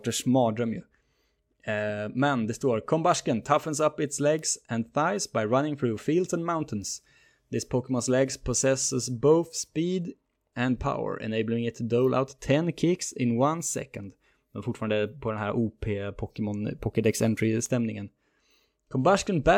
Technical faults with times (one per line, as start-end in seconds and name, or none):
4.39 bit error spike
17.66 bit error spike